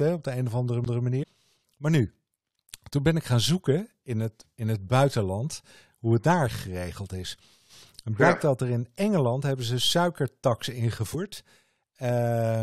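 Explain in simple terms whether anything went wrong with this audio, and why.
At 0.85 s, right after "op de een of", there is a CD skip. The laser jumped to another turn of the disc. You hear a very brief silence, then a jump.

Damaged data in a compressed stream shows up twice: at 1.22 to 1.24 s, and at 11.13 to 11.15 s after "hebben ze suikertax". Corrupted bytes made the decoder lose its place, causing short glitches.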